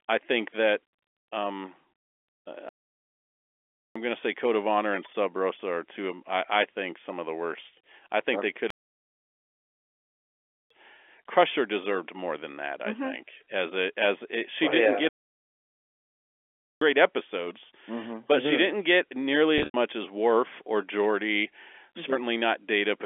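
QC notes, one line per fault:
2.69–3.96 s, 8.70–10.70 s (after "I think they could"), 15.09–16.81 s (after "she oh didn't yeah"): playback stall. The speech stops dead mid-flow for about 1.26 s, 2.0 s and 1.72 s, likely because the player ran out of data. Total silence, with no held tone, separates these from concealed packet loss.
19.58–19.74 s (after "she didn't get nearly"): packet loss with pitch repetition. About 130 ms was lost, scattered over 160 ms with a longest gap of 90 ms. The last pitch period repeats as a brief buzzy hold, fades toward silence, then cross-fades back, unlike a stall's abrupt silence.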